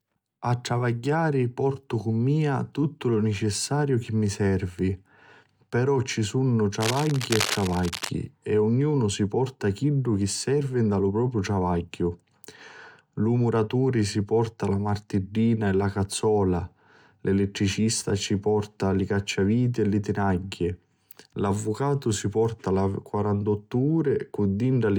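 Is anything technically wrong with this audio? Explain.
Yes. Cable scratch noise runs from 6.79 to 8.11 s, starting just after "ci sunnu" and clearing before "e ognunu si porta". The likely cause is a worn cable, connector or control being moved, so its contact resistance jumps around rapidly and injects dense, irregular bursts of noise. For just over a second, a scratching rustle sits over the speech, only slightly quieter than the speech itself.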